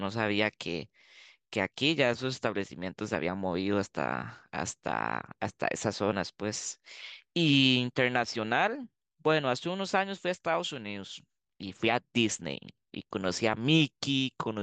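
Listening through the speech recording, nothing stood out as a technical problem at any point.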